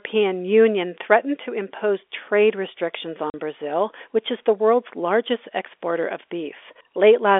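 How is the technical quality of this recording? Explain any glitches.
There is one glitch, after "to impose trade restrictions", on a narrow telephone-band G.711 line. At 3.30 to 3.34 s, packet loss filled with silence cuts a 40 ms hole, which fits two 20 ms packets. The receiver inserts silence, so the gap has hard edges.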